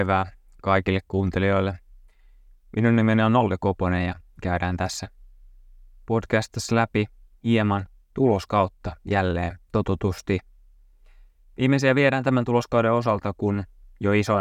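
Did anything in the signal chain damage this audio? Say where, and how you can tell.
Yes. A bit error spike sits at 13.09 s, just after "viedään tämän tuloskauden": one sharp, broadband tick with no relation to the surrounding speech. It lasts a single sample and peaks at about -32 dBFS, then the waveform returns to where it was. That signature points to the digital domain, memory or a digital link, where one flipped bit shifted a sample's value by a power of two for that instant.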